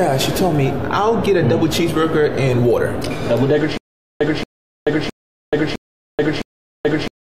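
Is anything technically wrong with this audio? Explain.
Yes. From 3.77 s to the end there is a stutter with silent gaps: the same 228 ms fragment replays five times, each followed by about 433 ms of digital silence, a steady 661 ms cycle. This is likely a stalled player or stream that keeps re-sending its last buffer and then runs dry, so the sound that belonged there is lost. Unlike plain dropouts, the gaps are evenly spaced and the identical burst returns each time.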